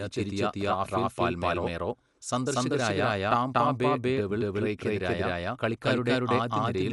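Throughout, a doubled audio track trails the sound by about 200 ms at similar level, likely from a second, slower capture path; the waveform shows every onset repeated abruptly.

Also throughout, Dolby Digital compression leaves the audio dull, with rough, fluttering noise; the spectrogram is empty above 11.5 kHz, likely from a low bitrate around 64 kbps.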